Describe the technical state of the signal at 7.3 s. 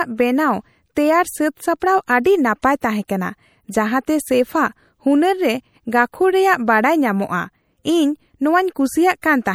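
At 7.3 s, as throughout, MP3 compression near 64 kbps by ear likely drops weak frequency lines frame to frame, leaving the speech plainly watery and swirly.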